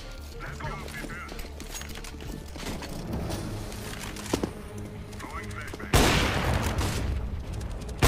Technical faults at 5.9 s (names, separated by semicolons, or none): none